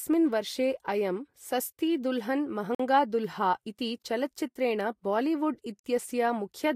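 Two short holes cut into the speech, at 2.75 to 2.80 s and again at 5.80 to 5.84 s, each about 48 ms of silence. This is a gap between chunks: the audio arrived in 3-second pieces, and each join left a brief stretch of silence inserted rather than lost.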